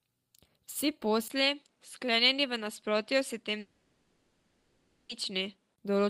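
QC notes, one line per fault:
1.28–5.78 s, input switched to a poorer device: after a brief 20 ms gap the sound loses everything above 11.4 kHz and takes on a new tone and a faint background noise well below the speech at much the same level, likely from a narrower-band microphone taking over.
3.59–5.11 s, long network dropout: about 1.5 s of audio never arrives, and the receiver covers the whole gap by stretching the last sound into a synthetic buzz-like fill with no drop to silence, likely from lost packets, before the speech resumes with that stretch missing.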